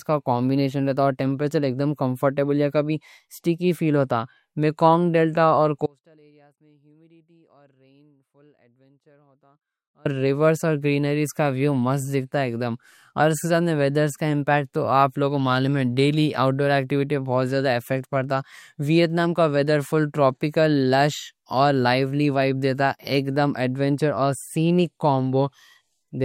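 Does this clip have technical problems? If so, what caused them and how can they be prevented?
Yes. An audio dropout to a faint residue cuts the speech abruptly from 5.86 to 10.05 s, leaving a faint leak about 35 dB down, likely from a broken signal path. The waveform shrinks to a thin sliver, sharp-edged on the spectrogram. Secure connectors and monitor recordings live.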